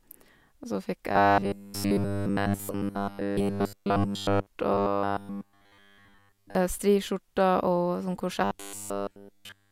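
From 1.12 to 4.47 s after "så fikk", 4.72 to 6.55 s, and 8.44 s to the end, robotic sound from repeated short buffers turns speech into a rigid 100 Hz buzz, likely a 10 ms chunk replayed while new audio is skipped. Spectrograms show flat 100 Hz harmonic combs, and waveforms show identical repeating cycles.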